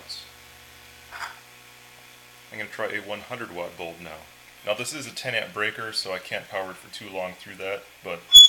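Compressed frames were skipped at 1.12 s: the decoder never played a short run of frames, either missing from the file or rejected as damaged. The audio jumps ahead by around 50 ms, which fits a couple of 23.2 ms frames.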